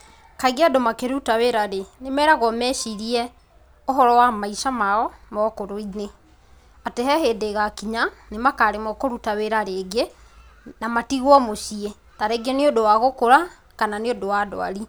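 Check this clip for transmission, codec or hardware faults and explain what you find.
Across the whole recording, the speech signal shows no audible technical faults.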